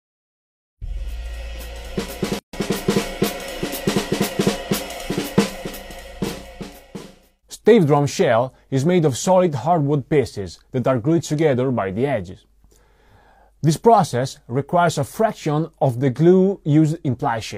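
A gap at a join of encoded pieces interrupts the audio from 2.39 to 2.53 s: about 143 ms of silence, where separately encoded sections were butted together with their encoder delay and final-frame padding left in. On a waveform it appears as a flat dropout, and on a spectrogram as a clean vertical blank band with slightly smeared edges, before the sound resumes where it stopped.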